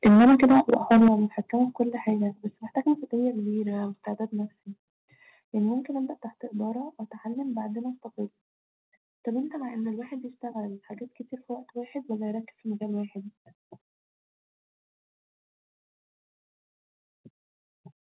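A speech recording whose microphone input was likely set far too high, so for the first second, from 0.05 to 1.08 s, the peaks ran into the converter's ceiling by about 12 dB. This microphone overload flattens the tops of roughly a third of the waveform, giving the loudest syllables a harsh, crackling, buzzy edge. The call software then likely reacted by cutting the device's input gain in discrete jumps rather than smoothly. This microphone volume stepped down pattern shows up at 0.07 s (about 4 dB), 1.08 s (about 11 dB, the step that ends the distortion), 2.1 s and 3.12 s (about 3 dB each), and 4.14 s and 6.18 s (about 2 dB each). Each jump is heard as an abrupt drop in voice and background together, roughly once a second at first, then spacing out. Throughout, nothing is audible above 4 kHz, and this narrowband, telephone-like character points to a 64 kbps G.711 mu-law call path.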